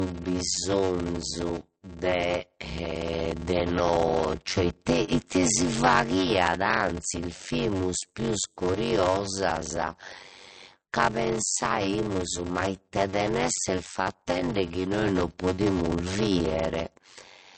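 From start to end, the speech carries a block size mismatch (padded): each block is zero-filled, causing a 93.8 Hz buzz and 0.625× speed at unchanged timbre, which fits 512-sample reads. Throughout, nothing sounds above 8.3 kHz and coding artefacts remain, likely low-bitrate MP3, around 40 kbit/s, saved at a high bitrate such as 192 kbit/s.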